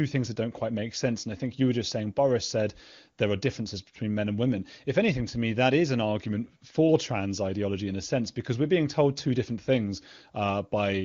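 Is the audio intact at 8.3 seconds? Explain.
Yes, at 8.3 seconds the speech is intact, with no dropout, click or other fault at that moment.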